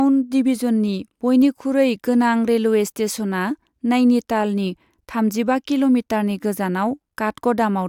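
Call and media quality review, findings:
No faults found in the speech recording. No action required on this ticket.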